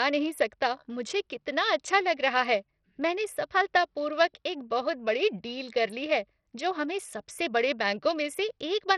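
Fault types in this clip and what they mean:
Bluetooth SBC compression: The speech is likely passed through the SBC Bluetooth codec. Nothing is heard above 14.4 kHz. The treble is thin and flickering, with gritty noise and aliasing over it. The damage is heavy, which fits a bitrate near 64 kbps.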